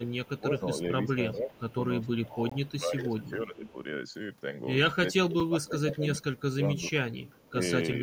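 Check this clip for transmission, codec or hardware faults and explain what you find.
Three kinds of fault are present: speech suppressed in double talk, echo leak, and two blocks of digital silence.

Speech suppressed in double talk runs from 0.0 to 3.74 s and from 5.24 to 8.02 s. The talker's level dips and breaks up in pieces, for roughly 1.5 s in total in the first stretch. The deepest drops reach about 20 dB, then about 25 dB later. The likely cause is an echo canceller that could not tell its own talker from loudspeaker echo. So it turned both down.

Echo leak appears at 0.07 to 2.09 s, 2.65 to 3.74 s, 6.38 to 6.42 s and 7.25 to 7.49 s. A faint copy of the voice trails it by 386 ms. It sits about 30 dB below the speech at first. It rises to about 20 dB below, then falls to about 35 and 30 dB below. This is likely a far-end loudspeaker setup whose echo canceller let some microphone pickup through.

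A block of digital silence cuts the audio from 2.50 to 2.52 s, a 20 ms hole. A second, 5 ms long, falls at 5.40 s. The signal drops straight to silence and returns with no fade, so the short one sounds like a tick and the longer one like a brief gap. Such blocks arise when output buffers go unfilled in time.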